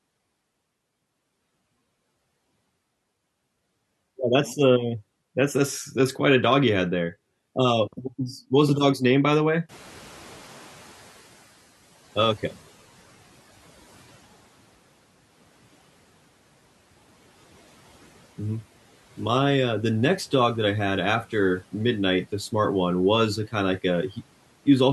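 Clock slip clicks run through this speech clip from 0.12 to 24.92 s, a soft regular ticking roughly every 70 ms, likely from two unsynchronised clocks drifting about 300 ppm apart. Noise suppressor catching up occurs from 9.69 to 11.54 s: after the room noise jumps near 9.5 s, it comes through with less reduction at first, then sinks by about 9 dB over 1.85 s as the estimate adapts.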